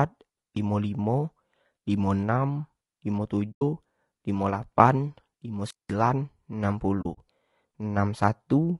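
Throughout, the speech sounds rough and grainy. Noise fills the gaps between the harmonics. The top band sounds thin and synthetic. This is likely low-delay AAC compression of the AAC-ELD kind used for video calls. Its short frames cannot separate the pitch harmonics cleanly, and each frame costs extra bits. The damage is plainly audible, which fits a bitrate around 32 kbps.

At 3.51 s comes the first AAC frame loss with muting. It lasts until 3.62 s. About 100 ms of audio is gone, which fits roughly five lost frames. The decoder filled the lost frames with silence. The overlapping windows fade the sound out and back in. The result is a soft-edged hole.

At 5.63 s there is a wireless microphone squelch dropout, ending at 5.93 s. The radio signal from an analogue FM microphone weakened. Hiss rises briefly. Then the receiver's squelch shuts the output. Near silence follows for about 190 ms. 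The speech then comes back.

From 7.01 to 7.18 s comes a second AAC frame loss with muting. This time about 80 ms is lost across a 160 ms stretch. The gaps are scattered, and the longest is about 40 ms. Several short soft holes flutter through the speech.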